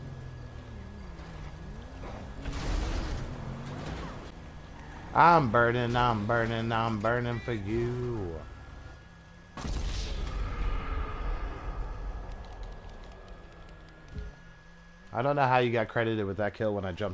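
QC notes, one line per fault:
The audio comes through a call path whose wideband coding leaves nothing above 8 kHz, which fits G.722 at 64 kbps, and no fault is present.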